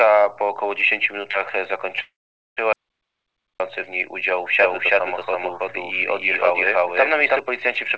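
At 2.02 s there's a call audio freeze lasting to 2.59 s. The last sound is drawn out and fades, then drops to near silence for about 460 ms before resuming exactly where it left off. That's most likely packets stalling in transit and the jitter buffer running dry, so roughly half a second of delay gets inserted with nothing lost.

Right after, from 2.73 s to 3.60 s, comes an audio dropout to silence. The sound cuts off mid-flow into dead silence with no room tone, likely a lost input or link, and about 0.87 s of material is simply gone.

Then from 4.59 s to 7.39 s you get a doubled audio track. A second full-band copy sits about 300 ms behind, at roughly the same level, with no reverb tail. It switches in and out abruptly, likely from a second, slower capture path. Through all of it the call-codec band limit is audible, with nothing above 8 kHz.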